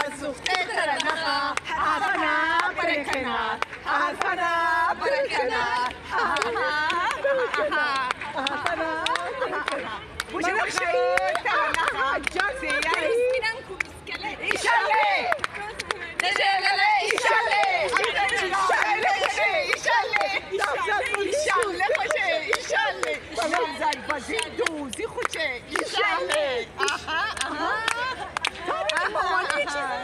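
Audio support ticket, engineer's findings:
Engineer's findings: no audio fault found in the clip.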